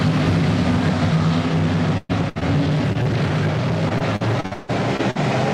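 The audio is interrupted by packet loss at several points. At 1.97–2.11 s and 2.29–2.37 s, the sound briefly stretches and fades before jumping ahead. These are bursts of packet loss: about 120 ms and 60 ms went missing, and the receiver filled each hole by extending the last sound. Shorter smears or wobbles at 2.39–2.43 s, 2.93–2.97 s and 3.03–3.07 s are short concealed packet loss, where roughly 20 ms holes were patched and blended back into the real audio. From 3.89 to 5.17 s the sound turns choppy and robotic. This is repeated packet loss: eight gaps, the longest 155 ms, with about 380 ms missing and roughly 30% of that stretch replaced by concealment.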